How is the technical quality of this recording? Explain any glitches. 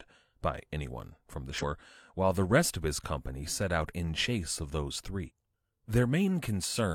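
The recording has two short glitches caused by damaged data in a compressed stream, at 1.58 to 1.64 s and again at 5.25 to 5.31 s. Each lasts about 60 ms. At those points corrupted frames threw the decoder out of sync while it hunted for the next valid frame header, producing a brief disruption in the speech. On a spectrogram each appears as a narrow vertical break in the speech pattern, and on the waveform as an abrupt discontinuity.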